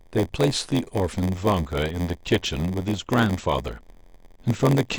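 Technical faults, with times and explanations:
Throughout: block size mismatch (padded). A steady buzz at 86.1 Hz sits under the speech because each block handed to the next stage falls short and its tail is filled with silence. That rate fits 512-sample reads at 44.1 kHz. The speech plays slower, at 0.938 times normal speed, but keeps its timbre. A waveform shows thin near-silent notches repeating about every 11.6 ms, and a spectrogram shows matching vertical stripes across all frequencies.
1.13 s to the end: adaptive stream at a lower bitrate. The quality suddenly drops and codec artefacts rise from this point on. The sound suggests the stream switched from a 128 kbit/s MP3 to a much leaner one, near 40 kbit/s. There is no gap at the switch. A spectrogram shows smeared, blotchy detail appearing at 1.13 s, while the waveform stays continuous.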